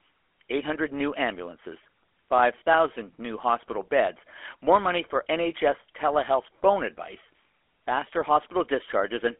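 GSM full-rate codec damage runs through the whole of this speech clip. The line is band-limited to 300 Hz to 3.4 kHz, and a plainly buzzy, gravelly roughness comes from coarse pulse excitation, which fits a 13 kbps rate.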